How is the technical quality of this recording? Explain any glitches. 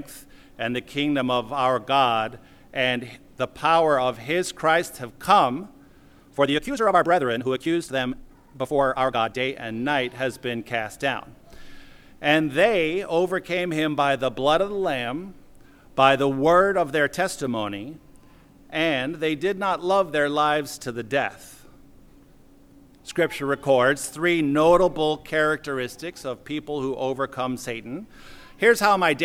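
One glitch stands out, a time-stretched section from 6.33 to 9.51 s. Software likely squeezed this stretch to fit a shorter length, playing it about 1.77 times faster while holding pitch by cutting out short slices of the waveform and joining what remained. The audio suddenly hurries at 6.33 s and sounds rushed, yet its pitch stays put. At 9.51 s the pace snaps back.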